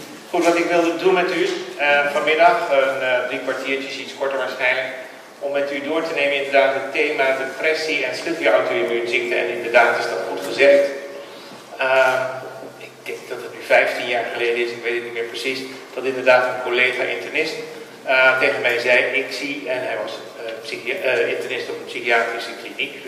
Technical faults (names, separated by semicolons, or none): none